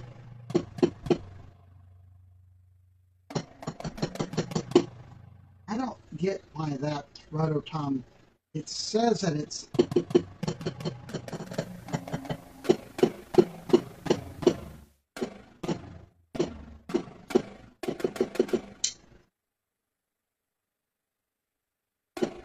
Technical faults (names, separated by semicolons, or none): overlap-add ripple; digital radio blending to analogue